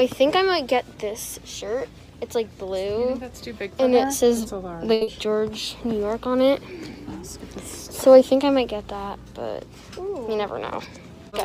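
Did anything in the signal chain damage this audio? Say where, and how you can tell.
Yes. At the network jitter buffer, a short stall from a late packet at 4.93–5.03 s held the last sound for about 80 ms until the late packet arrived, then resumed.

Short concealed packet loss follows at 5.03–5.09 s. About 60 ms never arrived, so the decoder extrapolated roughly 40 ms to fill it, leaving a brief smear.

A jitter buffer speed-up at 10.09–10.88 s trimmed pitch periods to shed about 70 ms of excess delay. The sound runs at 108 % speed, hurried but at unchanged pitch.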